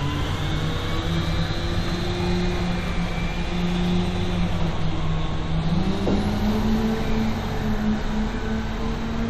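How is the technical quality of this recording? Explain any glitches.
No audible glitches or faults.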